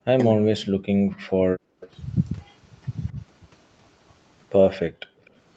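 Speech suppressed in double talk runs from 0.0 to 0.72 s and again from 1.2 to 1.59 s. The speech sinks by as much as about 40 dB, likely because the echo canceller mistook overlapping talk from both ends for loudspeaker echo and turned everything down.

An echo leak follows at 1.8 to 1.89 s: a faint copy of the speech, delayed by 248 ms and about 25 dB below it, slips through as a brief scrap. This is likely residual loudspeaker pickup that the far end's canceller failed to remove.

A shorter, milder suppression in double talk appears at 3.12 to 3.18 s. The speech dips by about 10 dB for a moment, likely the same canceller briefly attenuating during overlap.

Background gated by the echo canceller hits from 4.88 to 5.24 s. While the loudspeaker played, the canceller clamped the microphone, dropping the room sound by about 40 dB for nearly half a second before releasing it.

A second echo leak comes right after, at 5.25 to 5.3 s. 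A trace of the same 248 ms delayed copy, about 35 dB down, likely escapes. The call's microphone processing shows in the band limit, with nothing above 8 kHz.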